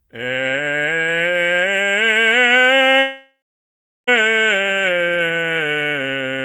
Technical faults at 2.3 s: none

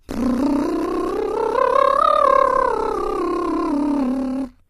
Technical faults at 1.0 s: HE-AAC compression

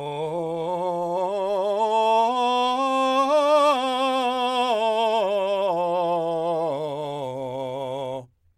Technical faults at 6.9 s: none

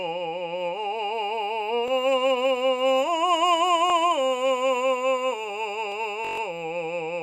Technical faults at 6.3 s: system hang loop

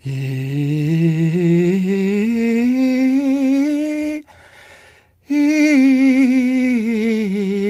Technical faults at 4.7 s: none

